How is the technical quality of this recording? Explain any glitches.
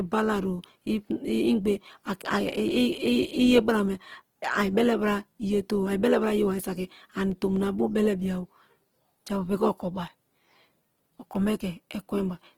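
The recording is marred by plainly audible compression damage that runs through the whole clip, most likely from Opus compression at a low bitrate. The encoder appears to be in its music (CELT) mode, keeping each band's overall energy but with too few bits for the detail, so bands get filled with folded copies of lower ones or with noise. The speech therefore sounds rough, grainy and noisy rather than swirly, though the bandwidth stays wide, reaching about 20.2 kHz, even at a rate around 16 kbps.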